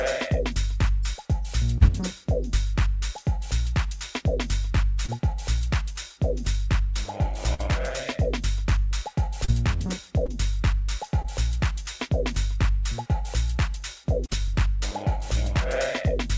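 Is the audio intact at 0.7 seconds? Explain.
Yes, the audio at 0.7 s is intact, with only the expected band limit of a call path that has nothing above 8 kHz, which fits a G.722 call.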